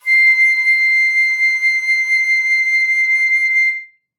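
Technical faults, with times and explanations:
2.16–2.25 s, compressed frames skipped: the sound leaps ahead about 50 ms, because whole encoded frames were lost or rejected.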